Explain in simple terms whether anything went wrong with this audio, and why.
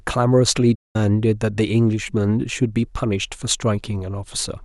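At 0.75 s the speech cuts to silence for about 0.2 s, then resumes. This is a playback stall, likely the player briefly running out of data.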